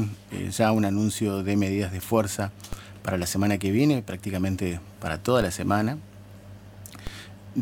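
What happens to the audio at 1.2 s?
Nothing goes wrong at 1.2 s; the audio there plays through intact, with no dropout, click, glitch or other audible fault.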